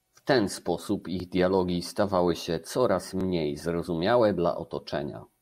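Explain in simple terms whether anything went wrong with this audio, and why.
Something did go wrong. The speech has a fault called overlapping chunks. The audio was handled in 2-second pieces, and each piece started slightly early. So 6.5 milliseconds play twice at every join. You hear a brief click or stutter at 1.20 s and 3.21 s.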